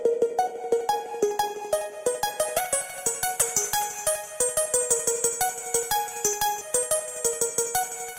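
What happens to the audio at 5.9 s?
At 5.9 s the sound carries straight through with no dropout, click, distortion or other fault.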